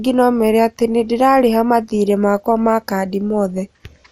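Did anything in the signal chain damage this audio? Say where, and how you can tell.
Yes, at the codec stage: the speech sounds dull and gurgly throughout, with a granular, watery edge and nothing above about 16.5 kHz. That's likely MP2 compression at a low rate, around 80 kbps, with upper sub-bands dropping out and the rest coarsely quantised.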